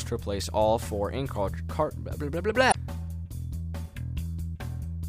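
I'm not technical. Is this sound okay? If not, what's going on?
No. At about 2.68 s there is a brief glitch lasting roughly 0.08 s, ending by 2.76 s. This is damaged data in a compressed stream. The audio was stored in a compressed format, and a small piece of that stored data got corrupted. The player could not read that piece properly, lost its place, and had to find the next readable section before normal playback could resume.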